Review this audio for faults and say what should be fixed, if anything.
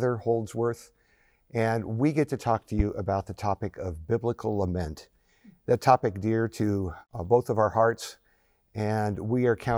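A single loud pop sits at 2.79 to 2.82 s. It is a sharp click lasting about 30 ms. It peaks roughly 10 dB above the surrounding sound, which carries on beneath it without a break. A pulse this short and steep likely came from a voltage spike entering the chain, such as a connector being touched, a switch, static or a driver glitch. The following circuitry shaped it into a brief thump. Removing it needs a click-repair pass over that short span. To prevent it, secure cables, ground equipment, and avoid switching anything during recording.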